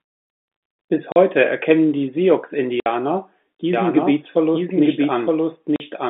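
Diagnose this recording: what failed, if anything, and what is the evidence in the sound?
Packet loss filled with silence, at the network stage: the telephone-band sound drops to dead silence at 1.12 s for 40 ms, at 2.8 s for 60 ms and at 5.76 s for 40 ms, with hard edges. The waveform shows flat gaps, and the spectrogram shows blank vertical slots. These multiples of 20 ms fit lost 20 ms packets that the receiver replaced with zeros.

Doubled audio track: from 3.73 s to the end, a second full-band copy of the sound runs about a second behind the original at roughly equal level, with no decay or room colour. It enters abruptly. On a spectrogram, the same patterns repeat about one second apart. This likely comes from a second, slower capture path being mixed in.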